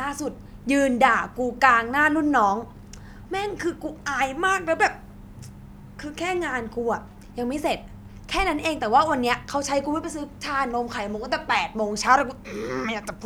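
No audible technical faults turn up anywhere in this speech recording.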